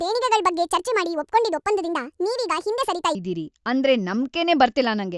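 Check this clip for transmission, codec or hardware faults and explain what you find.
One fault is present. Wrong sample rate, 0 to 3.15 s: the speech runs 1.5 times fast and about 7 semitones high, which fits 16 kHz audio played at 24 kHz without conversion.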